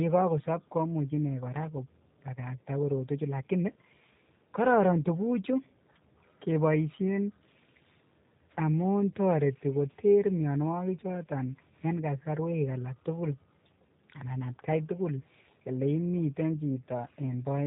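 Throughout, the speech carries G.729 codec damage, and it is plainly audible. Nothing above 3.8 kHz survives. Each frame is rebuilt from a vocal tract filter, pitch prediction and a few pulses. The result sounds rough and slightly synthetic, which fits an 8 kbit/s G.729A coder.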